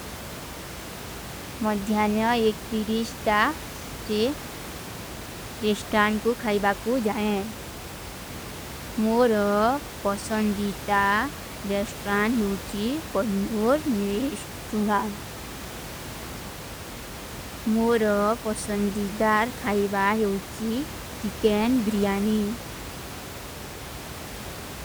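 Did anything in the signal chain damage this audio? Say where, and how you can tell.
No, nothing damaged this audio.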